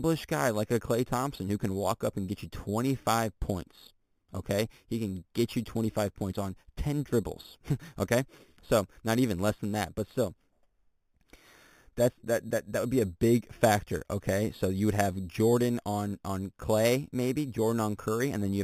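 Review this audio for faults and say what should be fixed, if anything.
There's imaging from sample-and-hold upsampling running through the whole speech clip. It sounds like audio at 8 kHz was brought up to 48 kHz by just repeating each sample, with no smoothing filter. So mirrored copies of the spectrum sit around each multiple of 8 kHz. The first one lands between 4 and 8 kHz, roughly 18 dB below the speech, and you hear it as a metallic fizz that rides the level and moves against the pitch. To prevent it, resample with a proper interpolating low-pass filter.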